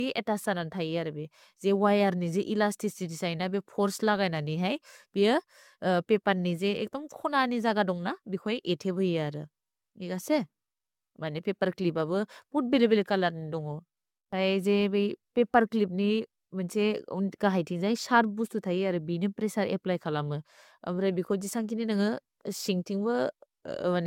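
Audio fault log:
Throughout, generation loss: speech sounds swirly, hollow and smeared, with blurred attacks and nothing above 17 kHz, likely from roughly four successive lossy AAC encodes near 96 kbit/s.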